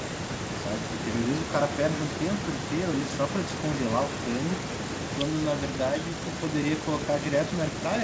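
From 0 to 0.51 s, the speech is pushed down in pieces, falling by about 20 dB at its deepest, for roughly 0.4 s in all. This is speech suppressed in double talk. Likely, the echo canceller mistook the talker for loudspeaker echo while both sides spoke.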